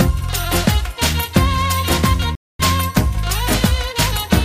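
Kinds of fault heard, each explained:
Playback stall: at 2.35 s the sound cuts out abruptly mid-flow and stays silent for about 240 ms, resuming at 2.59 s. The gap most likely comes from the player running short of data or having its output thread blocked until it recovered.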